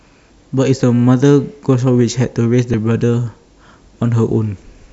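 At 2.74 s the speech has a single abrupt skip. There is no gap of silence. The sound simply jumps forward at that instant. The likely cause is a dropped buffer (overrun): the program failed to collect its samples before the hardware overwrote them. A very short slice, around a millisecond or two, went missing. The audio on either side was joined edge to edge, and that abrupt seam is the jump that is heard.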